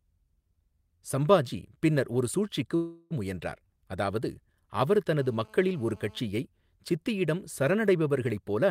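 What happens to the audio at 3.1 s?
At 3.1 s the audio is just coming out of a call audio freeze that runs from about 2.75 to 3.13 s. The last sound is stretched into a fading buzz or hiss for roughly 350 ms and never drops to silence. The likely cause is packets held up in transit, emptying the jitter buffer. Unlike packet loss, nothing is cut out. The speech resumes exactly where it stopped, only about 350 ms later.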